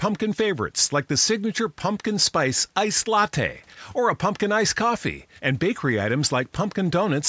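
Nothing stood out on listening to this speech, which comes through a call's usual microphone processing with the lowest bass trimmed and nothing above 8 kHz.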